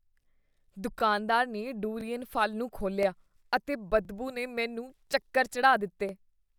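Overlapping chunks cause a brief stutter at 0.99, 2.01, 3.03, 4.05 (just before "ਨੇ ਮੈਨੂੰ ਚੱਕਰ"), 5.07 and 6.09 s. Each 1 s chunk replays the last 20 ms of the one before. The regular spacing and repeated audio, not a silent gap, set this apart from dropouts.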